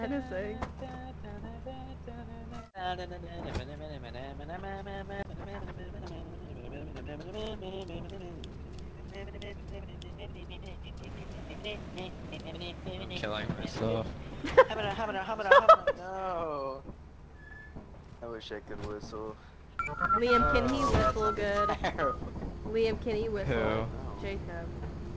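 No technical faults can be heard; the audio came over a normally working WebRTC call path, and the complete absence of content above 8 kHz fits a G.722 wideband codec running at around 64 kbps.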